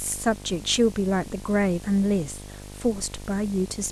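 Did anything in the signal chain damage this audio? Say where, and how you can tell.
Yes. Video or display buzz has leaked into the analogue wiring and sits under the speech for the whole clip. It is a steady 50 Hz buzz with gritty hash riding above it, at roughly 15 dB below the speech. A screen or video cable near the audio lines is coupling its field-rate pulses in. Ordinary mains hum is a smooth tone at the supply frequency and its harmonics, without that buzzy, hash-laden edge.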